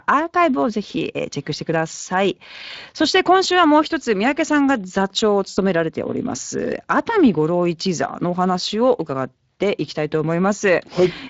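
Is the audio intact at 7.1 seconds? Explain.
No. Speex codec damage runs throughout, including 7.1 seconds: starved CELP excitation, consistent with about 20 kbps, makes speech hoarse and noisy, not watery or swirling like transform codecs.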